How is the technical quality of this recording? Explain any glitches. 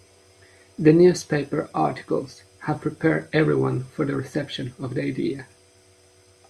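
No audible glitches or faults.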